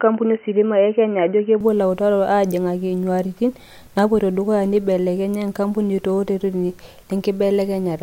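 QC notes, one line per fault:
0.0 to 1.6 s, input switched to a poorer device: the speech opens dull and boxy with nothing above 3 kHz and faint added background noise, then clears up with no gap and the level about the same, likely a narrower-band mic or headset call profile.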